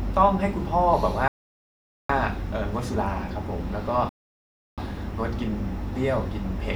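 Speech plays with two rebuffering stalls. At 1.28 s the sound drops to silence and stays silent until 2.10 s, adding about 0.82 s. At 4.09 s it stops again until 4.78 s, adding 0.69 s. Each time, the speech picks up exactly where it left off. Nothing is skipped. The player ran out of downloaded audio and waited for more data before continuing, so the gaps only stretch the timing.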